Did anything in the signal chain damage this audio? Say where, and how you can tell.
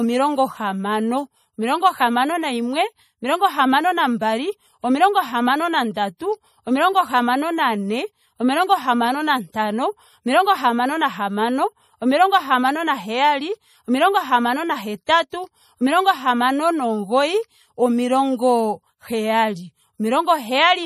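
Yes, at the codec stage. The speech has a watery, swirly texture throughout, with nothing above 15.2 kHz. That points to MP3 compression, likely at a low rate around 40 kbps. A fixed treble ceiling plus flickering detail separates this from a simple low-pass filter.

Pre-echo appears at 15.05 s (about 33 ms) and 15.30 s (about 24 ms), both just after "naheyali omilongo hamano na", the second leading into "omilongo hamano". A short hiss runs ahead of each onset as the codec's block noise spreads backward. Unlike a click, it smears the attack.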